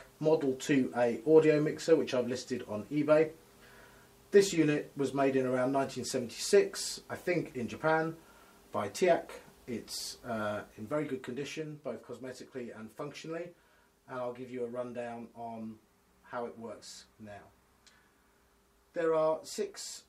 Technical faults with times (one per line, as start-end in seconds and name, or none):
10.49-11.73 zipper noise